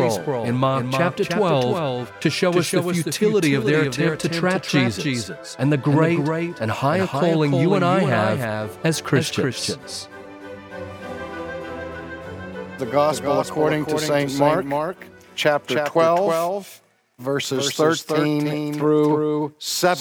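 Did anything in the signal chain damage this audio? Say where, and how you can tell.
Yes. A doubled audio track runs through the whole clip: every sound is followed by a full-band copy roughly a third of a second later, about 5 dB quieter. The repeat has no decay tail or room colouring, so it is a clean second copy of the signal, not an acoustic echo. It most likely comes at the capture or editing stage, where a slower second recording path or a misaligned duplicate in the edit mixed a delayed copy back in alongside the original.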